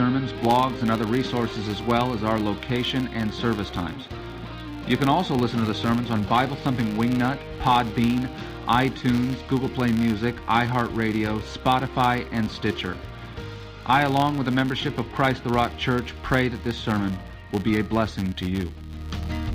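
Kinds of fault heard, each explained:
Filter restarted on every block: the filter drops its state each 10 ms block, so from 0.35 s onward a 100 Hz buzz tracks the signal's level.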